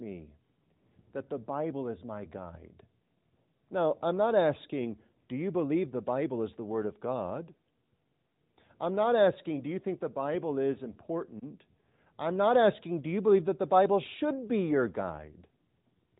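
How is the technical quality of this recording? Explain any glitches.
No glitches or faults can be heard anywhere.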